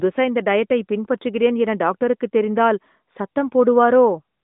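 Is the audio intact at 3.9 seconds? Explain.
Yes, at 3.9 seconds the audio is intact, with no dropout, click or other fault, only the narrow telephone band of the AMR narrowband mobile codec.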